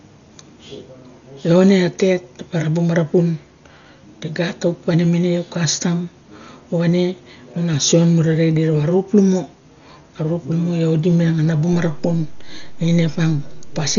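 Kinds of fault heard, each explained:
Dolby Digital compression: likely a heavily starved 40 kbps AC-3 encode, leaving speech dull with nothing above 6.9 kHz and rough, fluttering dither noise filling the gaps.
DC step: the waveform's zero line jumps at 11.73 s, heard as a low thump, and the offset holds to the end while speech continues unchanged.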